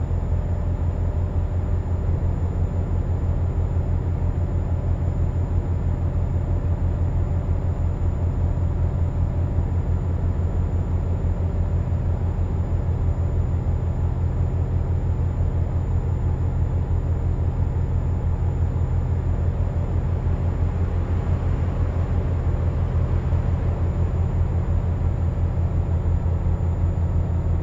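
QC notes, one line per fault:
Nothing here needs flagging; it's all fine by ear.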